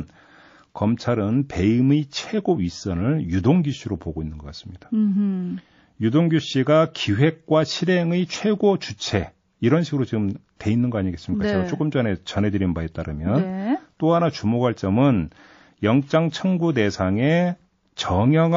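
Throughout the speech there is plainly audible MP3 compression damage, most likely from an encoder starved of bits, which fits a rate around 32 kbps. Weak frequency lines switch on and off between frames, giving a watery, swirling texture with metallic chirps on s sounds. On a spectrogram the upper region shows scattered, flickering holes.

At 10.57 to 10.60 s, a sharp attack arrives late in its block, and the quantisation noise meant for the loud part spills into the quiet moment before it. This is pre-echo: a brief hiss about 38 ms long, roughly 12 dB above the surrounding floor, and the attack itself sounds smeared. The waveform shows a fuzzy noise ramp ahead of the transient rather than a clean onset, and the spectrogram shows a broadband smear just before the attack. The spread points to a long transform window of around 72 ms with no switch to short blocks.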